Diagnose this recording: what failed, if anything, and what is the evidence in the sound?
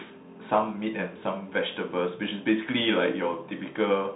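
The failure is at the codec stage: a Bluetooth CVSD headset codec runs through the whole speech clip. Nothing passes above 3.8 kHz, s sounds come out scratchy, and a granular hiss sits under the speech. The one-bit up/down coding, whose step size lags on loud high sounds, tells it apart from a clean narrowband filter.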